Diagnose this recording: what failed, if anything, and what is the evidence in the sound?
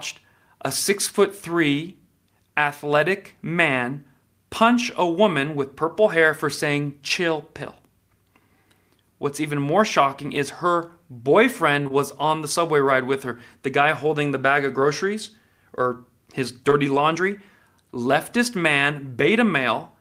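Short concealed packet loss on the network path. Two back-to-back gaps span 11.83 to 11.92 s and a third falls at 16.70 to 16.73 s, each missing 20 ms of speech. The receiver extended the preceding sound across each hole, leaving brief smears.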